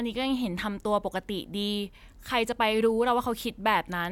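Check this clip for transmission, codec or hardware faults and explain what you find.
No faults found on listening; the speech carries no audible defect at any point.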